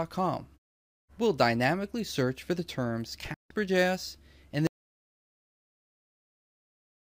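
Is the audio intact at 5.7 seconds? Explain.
No. At 5.7 seconds you're inside an audio dropout to silence that starts at 4.67 s and runs right through to the end of the clip. The sound cuts out abruptly mid-flow and what follows is dead silence, not even room tone underneath. That points to the input having likely been lost, say a device dropping off or a link failing, while the recorder kept writing silence, so whatever happened after 4.67 s is simply gone.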